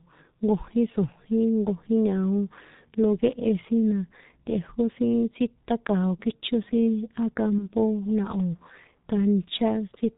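G.723.1 codec coding runs through the whole recording. The speech is squeezed into a narrow band with nothing above 4 kHz, so it sounds muffled, and the coarse 30 ms frame updates leave vowels hoarse and consonants smeared together. The damage is heavy, and the codec runs in its 6.3 kbit/s mode, where very few bits describe each stretch of voice.

VoIP packet loss concealed by the speech codec occurs from 7.58 to 7.66 s. About 30 ms of audio went missing, consistent with a single lost frame. The decoder filled the gap by repeating its last pitch and vocal-tract shape at falling gain, which stretches the last sound into a fading fill. Each frame is built on the previous one, so the sound stays weak or distorted for a short while after the gap before the signal recovers.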